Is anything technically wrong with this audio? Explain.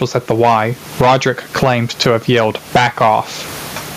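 Yes. Gain pumping runs through the whole speech clip. The level is pulled down on each loud syllable and recovers in pauses, swinging roughly 15 dB. The likely cause is input gain set far too high, with a fast limiter clamping every peak.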